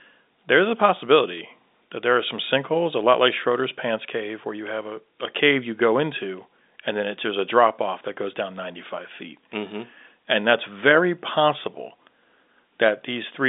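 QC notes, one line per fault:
No faults are heard in this speech: it carries the normal telephone band of roughly 250 Hz to 3.7 kHz with nothing above 3.8 kHz, as expected of G.711 mu-law coding at 64 kbps, and any coding damage is faint at most.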